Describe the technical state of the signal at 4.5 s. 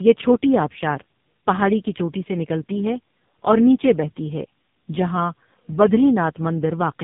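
At 4.5 s the speech shows tandem speech coding, present across the whole clip. Two low-rate speech coders in a row each re-encode degraded audio, so it sounds rough, muffled and warbly, with nothing above 3.7 kHz.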